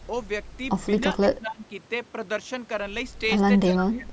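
Speech that dips by roughly 15 dB at 1.29–1.62 s and about 20 dB from 3.65 s to the end, likely speech suppressed in double talk: partial ducking during overlap, not the abrupt silence of a dropout.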